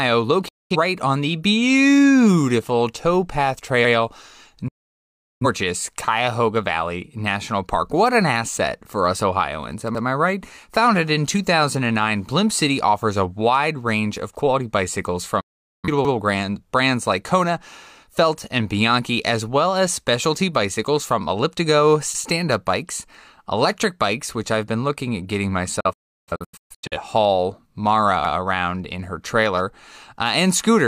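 Speech with two kinds of fault. A digital broadcast dropout mutes the sound, fading out over about 8 ms, at 0.48–0.76 s just before "on the beautiful towpath", at 4.68–5.46 s, at 15.40–15.88 s, and in scattered holes from 25.8 to 26.97 s after "been looking at getting", the longest about 0.34 s. The lost stretches fit whole frames of about 43 ms failing, and show as flat, empty gaps in the waveform and blank columns on a spectrogram. Overlapping chunks cause a 100 ms stutter at 9.95 s and at 16.05 s just before "brands like". The chunks are 6 s long and each restarts slightly early, so a repeated slice and a vertical click line appear at the joins.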